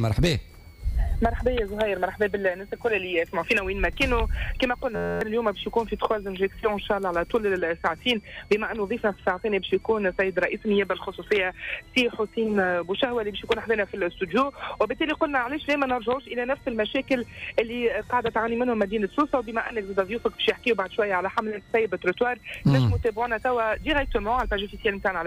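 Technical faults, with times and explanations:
Throughout: switching supply whistle. A switching power supply running in audible burst mode or beating with another one adds a high whistle near 2 kHz, drifting between about 1.75 and 2.46 kHz, roughly 35 dB below the signal.
4.96 to 5.21 s: system hang loop. The system froze while the hardware kept replaying an 11.61 ms buffer, which fits a 512-sample buffer, producing a steady buzz at 86.1 Hz.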